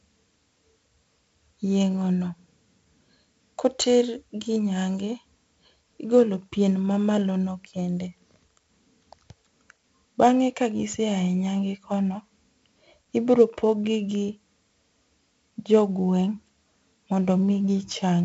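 Speech, with 4-bit ADPCM compression throughout: heavy gritty hiss riding every loud syllable, harsh attacks, and nothing above 7.7 kHz, which fits a 64 kbps stream.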